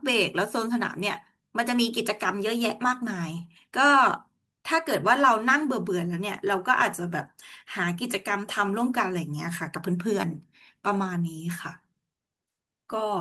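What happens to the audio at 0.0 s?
Nothing goes wrong at 0.0 s; the audio is intact at that moment.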